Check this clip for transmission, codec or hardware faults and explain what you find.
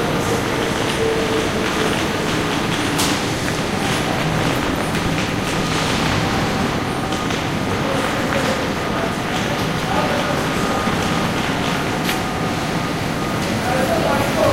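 Nothing in this recording of sounds points to a transmission, codec or hardware fault. No event anywhere in the audio calls for an explanation.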